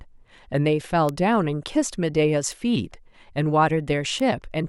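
At 1.09 s, 2.52 s and 4.20 s the speech carries a bit error spike: a flipped bit throws one or two samples off by a power of two before the signal snaps back. Each sounds like a sharp tick unrelated to the speech, peaking at about -11 dBFS first, then about -17 dBFS twice. On the waveform each is a lone needle, its width fitting one or two samples. On a spectrogram it appears as a thin vertical line across all frequencies.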